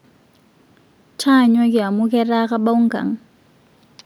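No technical faults are audible.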